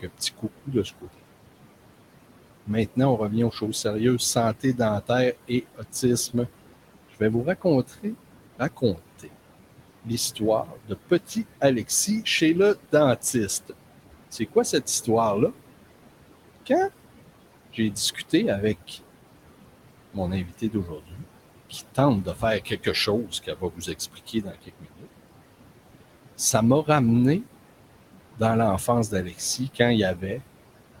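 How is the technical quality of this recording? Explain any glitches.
The recording is marred by processing faults from noise suppression. Room noise sits about 13 dB below the speech.

Noise suppressor artifacts run through the whole clip. The suppressor pushes steady-noise bands down by about 18 dB, frame by frame. The background sinks in pauses and swells under speech.

Speech cut by the noise suppressor occurs at 0.02–1.2 s, 2.66–15.08 s, 17.73–18.98 s, 20.13–27.45 s and 28.36–31.0 s. The suppressor mistakes quiet speech for noise and lowers it by about 12 to 18 dB. Soft consonants and word endings sound swallowed.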